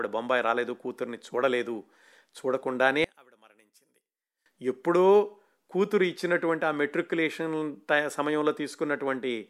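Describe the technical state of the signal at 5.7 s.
At 5.7 s the speech signal is intact, with no audible fault at that moment.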